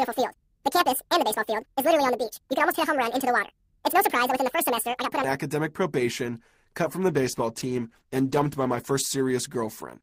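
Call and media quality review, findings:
Section at the wrong speed, 0.00 to 5.24 s. Sound runs 1.89 times too fast, pitch raised by close to ten semitones, speed and pitch shifted together. Likely cause: playback or editing stage clocking the section at the wrong rate. Normal speed from 5.24 s.

Call bitrate drop, 7.08 s to end of clip. Sound turns coarser and rougher, consistent with the encoder cut from about 48 to 15 kbps after the bandwidth estimate fell. Lowest rate held for 2.11 s.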